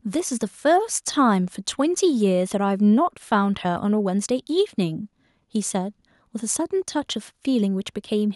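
A speech recording with nothing technically wrong with it at any point.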